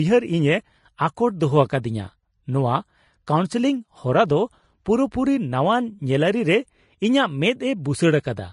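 Throughout the speech, the upper range sounds hissy and grainy, tones are roughened, attacks are blurred, and nothing is heard above 10.5 kHz. The cause is likely Vorbis compression at a low setting, consistent with a bitrate around 31 kbps, which crushes fine treble detail into noise.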